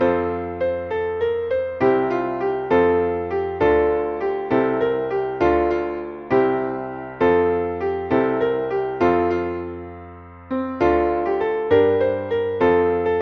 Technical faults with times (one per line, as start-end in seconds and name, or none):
none